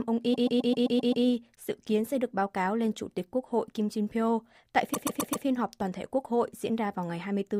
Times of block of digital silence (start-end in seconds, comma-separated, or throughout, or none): 1.56